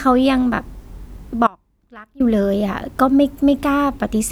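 Speech, where the signal was likely lost while the path stayed live: an audio dropout to a faint residue leaves only faint sound from 1.47 to 2.20 s.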